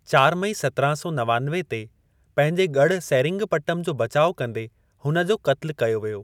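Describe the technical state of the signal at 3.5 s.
At 3.5 s the speech signal is intact, with no audible dropout, distortion, noise burst or other fault.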